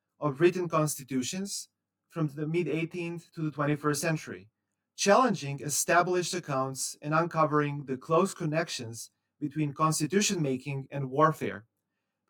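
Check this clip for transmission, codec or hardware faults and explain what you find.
There is one fault, and it runs through the whole speech recording.

Channel delay (comb filtering), throughout: one channel arrives roughly 20 ms late, and summing to mono cancels shared content at regularly spaced frequencies, starting near 30 Hz. This dense row of fixed notches makes the speech sound rough or slightly doubled.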